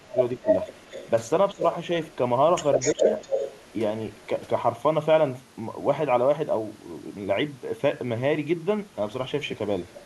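The speech dips sharply, by around 15 dB, from 0.01 to 0.48 s, again at 1.52 to 1.64 s and at 2.93 to 3.05 s. This is speech suppressed in double talk, likely an echo canceller that could not separate the talker from overlapping far-side sound and turned both down. Alongside these dips, a copy of the voice trails it by 240 ms: about as loud as the speech from 0.46 to 1.1 s and 2.79 to 3.73 s, faint at 2.11 to 2.16 s and 4.11 to 4.27 s, and much quieter at 9.88 to 10.03 s. That is echo leak, likely loudspeaker pickup the canceller failed to remove.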